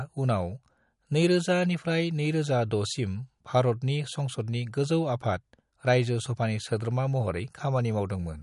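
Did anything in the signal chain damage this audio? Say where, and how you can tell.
Yes, at the codec stage. The speech has a hard ceiling, with nothing above 11.1 kHz for the whole clip, and there's a plainly audible watery, swirly quality, with metallic chirping on the s sounds and consonant attacks smeared. That's most likely MP3 compression run short of bits, which fits a bitrate of around 48 kbps. The encoder lops off the treble at a fixed point, and weak frequency lines that get zeroed flicker on and off between frames.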